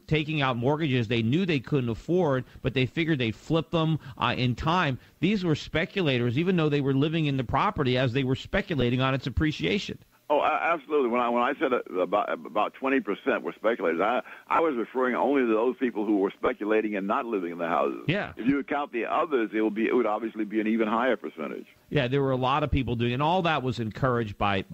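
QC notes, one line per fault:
8.81–8.83 s, 14.56–14.59 s, 16.46–16.48 s: lost LE Audio frames. The sound briefly turns into a noisy smear at each point. The gaps last 10 ms, 30 ms and 20 ms, which fits one, three and two lost 10 ms frames. The LC3 decoder fills each hole by repeating the last spectrum with random signs. That keeps the level but scrambles the phase, so any tone becomes hiss-like. Every dropout is short, so the fade to silence never arrives.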